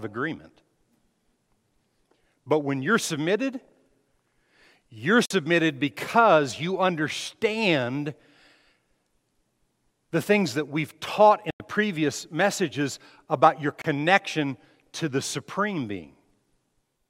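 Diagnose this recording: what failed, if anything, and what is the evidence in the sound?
Speech cuts to silence at 5.26–5.31, 11.50–11.60 and 13.82–13.85 s, resuming further on. Likely a Bluetooth dropout: late wireless packets were discarded.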